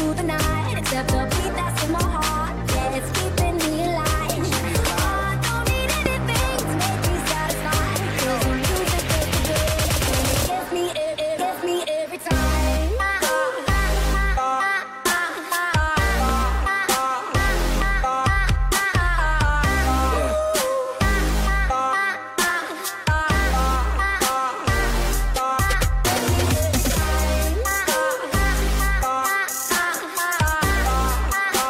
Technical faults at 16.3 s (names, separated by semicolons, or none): loud pop